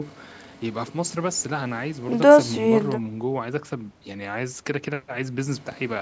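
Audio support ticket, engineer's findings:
No faults found in this speech recording. The call microphone processing is audible as expected, with the lowest bass rolled off by its high-pass filter and nothing above 8 kHz.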